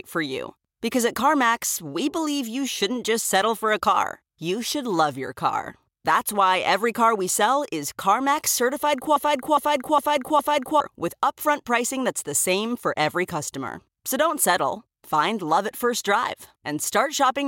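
A speech clip in which the player or stream likely stalled, producing a broken-record loop: from 9.16 to 10.80 s a 0.41 s fragment repeats four times, replacing the speech there.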